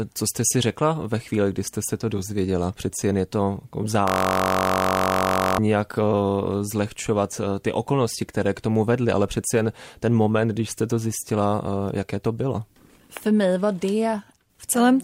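Right after "jen je to jako", from 4.08 to 5.58 s, a steady buzz at about 47 Hz: a system hang loop, one 21.33 ms chunk repeating, which fits a 1024-sample buffer.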